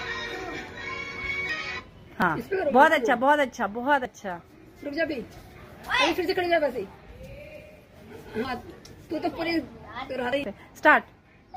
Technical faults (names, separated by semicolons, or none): dropped buffer (overrun)